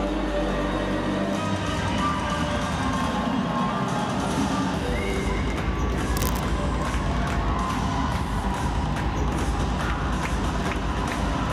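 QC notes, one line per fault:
6.16 to 6.40 s, cable scratch noise: for about a quarter of a second there's a dense, ragged burst of scratchy rustle sitting on top of the sound, and it's not much quieter than the material itself, roughly 10 dB down. That irregular crackle is the signature of contact resistance jumping around, most likely a worn cable, connector or pot getting nudged. The joint keeps making and breaking partial contact, so the noise arrives in uneven clumps.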